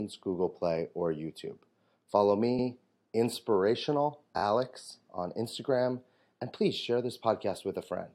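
At 2.58 s the speech hitches: a block of about 93 ms, which fits a run of roughly four compressed frames, plays once more, stretching the audio to 2.67 s. At 4.37 s it's repeated frames again, this time a tighter 23 ms chunk, which points to a single frame, looping twice extra through 4.41 s. That's a quick stutter and about 46 ms of added time.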